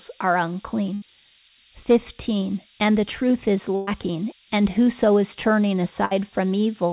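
Low bit depth with noise shaping runs from the first moment to the end of the speech. The sound sounds like it was quantised to about 4 bits, and the rounding error has been fed back and pushed upward in frequency. The result is a steady, thin hiss nearly as loud as the voice itself, climbing sharply toward the top of the band. That band stops at 4 kHz, as expected over a narrowband call path that points to G.711 mu-law.

A burst of packet loss strikes at 0.94 s, lasting to 1.03 s. About 80 ms of audio never arrived, and the receiver covered roughly 74 ms of it by stretching the last sound and letting it fade. A longer burst follows at 3.75 to 3.89 s, just after "the truth is": about 120 ms lost, 116 ms concealed as a held, decaying buzz or hiss with no true silence. The third, after "and whoso is turning" at 6.05 to 6.13 s, drops about 60 ms, 58 ms of it filled. Each time the speech resumes further along with the middle gone.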